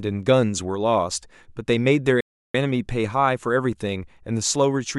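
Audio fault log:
2.21–2.54 s, playback stall: the speech just cuts out mid-flow and the output sits in dead silence for about 340 ms before picking up again. It's just a gap, which is what you get when the player has nothing to hand the output. Most likely the buffer ran dry or the playback thread got held up, and the sound resumed once data was flowing again.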